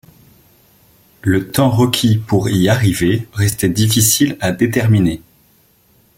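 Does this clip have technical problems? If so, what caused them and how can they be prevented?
Yes. This speech clip has overlapping chunks: at 1.50–1.52 s just before "temps requis pour y", at 3.52–3.55 s between "requis pour y arriver" and "difficile à déterminer", and at 5.55–5.57 s after "difficile à déterminer". Each 2.0 s chunk starts about 23 ms before the previous one ended, so that sliver plays twice, giving a brief stutter. Unlike a dropout, nothing goes missing, and the stutter repeats at a fixed 2 s interval. To prevent it, make each chunk's start exactly match the previous chunk's end, or crossfade and trim the overlap.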